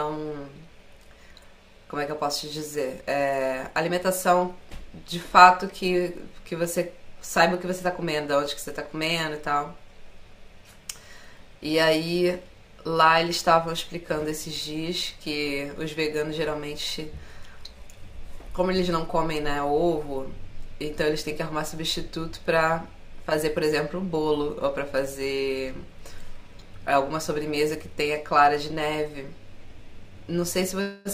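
Speech, with imaging from linear upsampling throughout. The rate went from 22 kHz to 48 kHz by joining samples with straight lines. The top sounds dulled. A faint mirrored copy sits between 11 kHz and 22 kHz, roughly 30 dB down, adding metallic shimmer to sibilants.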